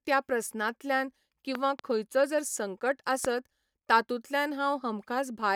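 At 1.55 to 1.81 s, after "त्या प्रस्नांतल्यान", two loud pops strike in quick succession. A single pop follows at 3.25 s, after "खंयचो जर संकट". Each jumps well above the speech, which continues beneath. A likely cause is a voltage pulse from a switch or static.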